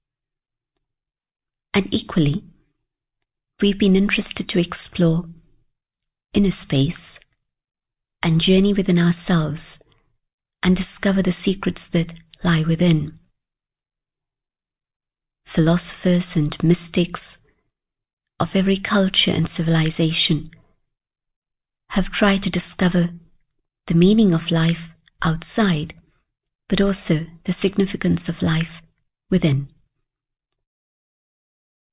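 No technical faults occur anywhere in the audio, so there is nothing to describe in time order.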